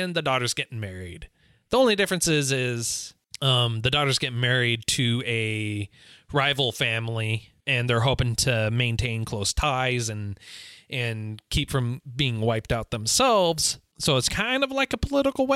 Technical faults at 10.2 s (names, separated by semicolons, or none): none